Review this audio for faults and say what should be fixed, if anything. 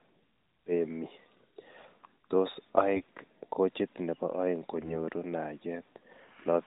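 AMR bit errors from 4.76 to 4.96 s: the sound turns hoarse and gargly while pitch and level hold. Unprotected bits in a handful of frames arrived flipped at around 5 percent, misplacing excitation pulses and skewing gain and spectral parameters in the narrowband decoder. Prevent it by strengthening channel coding on the weak radio link or switching to a lower, more robust AMR mode.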